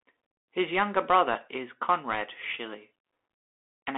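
Speech, passed throughout through a Bluetooth CVSD headset codec. The band runs from about 300 Hz to 3.6 kHz, so the sound is thin and boxed-in, with no air on top. The codec damage is plainly audible. CVSD sends a single up-or-down bit per sample and adapts its step size. That character fits a 64 kbps Bluetooth voice link. Fast, loud high-frequency movement outruns the step, leaving scratchy, granular distortion across the clip.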